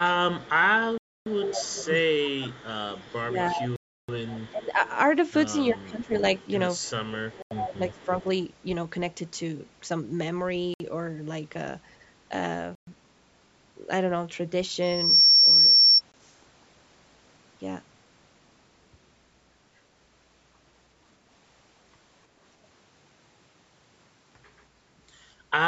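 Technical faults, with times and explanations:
0.0–1.89, 3.22–4.82, 5.74–6.23 and 7.31–8.26 s: speech suppressed in double talk. The voice dips by about 25, 15, 15 and 20 dB in pieces rather than stopping cleanly, likely an echo canceller ducking the talker while the far side spoke. Unlike a stall, the level dips or cuts out in pieces rather than in one clean gap.
0.39–8.24 s: echo leak. A faint copy of the voice trails it by 325 ms, at about 25 dB below the direct sound, likely loudspeaker pickup that the echo canceller failed to remove. It is a delayed repeat layered over the speech, not a gap or dip.
0.98, 3.76, 7.42, 10.74, 12.75 and 16.12 s: Bluetooth stall. The sound drops to dead silence for 284, 324, 87, 61, 121 and 20 ms, then resumes, likely a headphone buffer running dry while delayed packets were resent. The hard silence and clean resumption separate these from double-talk ducking.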